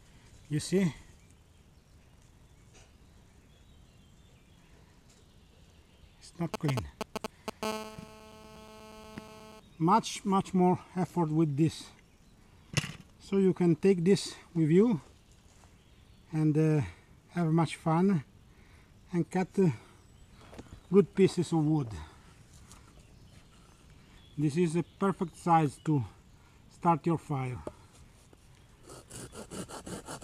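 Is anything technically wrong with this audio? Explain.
Yes. From 6.54 to 7.65 s there are GSM signalling bursts, nearly as loud as the sound itself. A nearby 2G phone's brief radio bursts are rectified into a galloping dit-dit-dit of ticks and 217 Hz buzz fragments. These come in broken groups rather than a continuous tone.

From 7.65 to 9.60 s a GSM phone buzz follows, about 16 dB below the sound. The phone now transmits in call mode, so the rectified pulses become a steady, raspy 217 Hz buzz rich in harmonics, unbroken rather than galloping.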